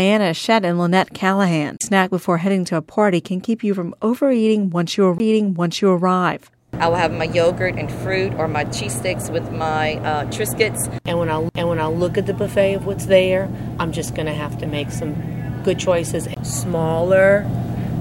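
A brief tick and dropout, then playback resuming from a different spot, occurs at 1.77–1.81, 5.18, 11.49 and 16.34–16.37 s. Each is a CD skip: the laser jumped tracks, muting the output for roughly 40 ms, 20 ms, a few milliseconds and 20 ms.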